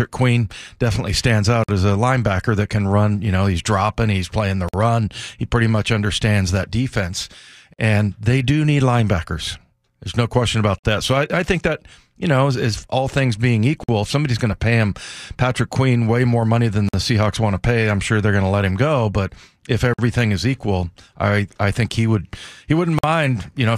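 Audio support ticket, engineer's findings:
Gap between chunks: 50 ms hard-edged silences at 1.64, 4.69, 7.74, 10.79, 13.84, 16.89, 19.94 and 22.99 s, one every 3 s chunk. Likely player or codec padding at the joins.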